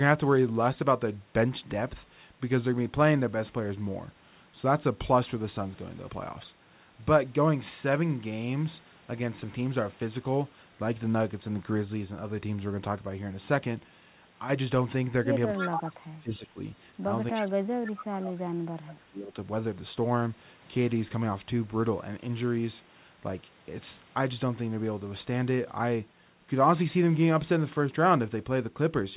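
From 14.30 to 14.50 s the speech abruptly loses about 6 dB, as if a layer of the sound had been pulled out, then snaps back to full level. This is a one-channel dropout. One side of a stereo feed likely went silent for about 0.2 s, and once the pair is folded to mono, material common to both channels falls by half while anything present only on the missing side vanishes.

Between 15.56 and 16.57 s the speech dips, with about 0.7 s of it affected and the deepest drops reaching roughly 20 dB. A second, heavier stretch follows from 17.32 to 19.36 s, where around 2 s of speech is pushed down by as much as roughly 30 dB. This is speech suppressed in double talk. Both ends were likely talking at once, and the echo canceller, unable to separate the local talker from loudspeaker pickup, turned both down.

Inside those stretches, at 15.57 and again at 17.34 s, a brief repeat of the voice appears about 0.3 s late, lasting roughly 0.12 s each time. 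The first is strong, only about 5 dB under the speech, and the second sits much lower, about 15 dB down. This is echo leak. A loudspeaker on one side likely fed the call back into its microphone, and the residue escaped cancellation. All of it sits under the narrow 4 kHz ceiling of the G.711 call path.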